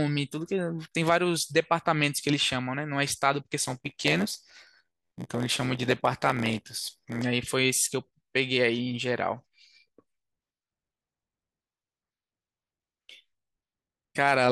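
From 3.58 to 7.22 s, a block size mismatch (padded), fitting a 512-sample buffer, adds an 86.1 Hz buzz and slows the speech to 0.938× at near-normal pitch. Zero gaps show as regular waveform notches and vertical spectrogram stripes.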